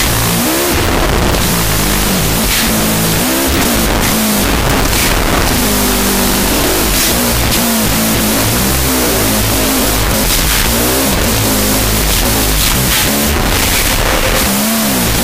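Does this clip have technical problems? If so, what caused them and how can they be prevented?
Yes. Throughout, there is a wrong sample width. 16-bit integer data were read as unsigned 8-bit, splitting each sample into two values: one keeps the top bits, the other is near-random low bytes. This gives loud noise over a buried original, at half speed and an octave low. Preventing it means declaring the sample format in the file header or stream metadata and checking that the reader's format matches the writer's.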